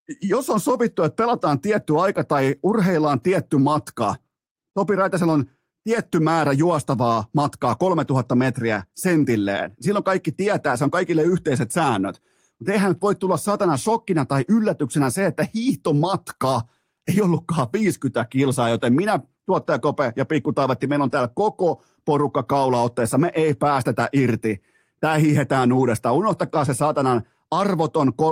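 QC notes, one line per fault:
Nothing stood out on listening to this speech clip.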